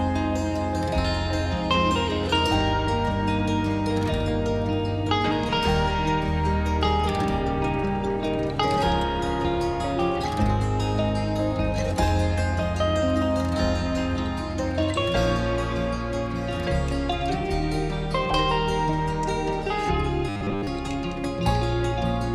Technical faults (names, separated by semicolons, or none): robotic sound from repeated short buffers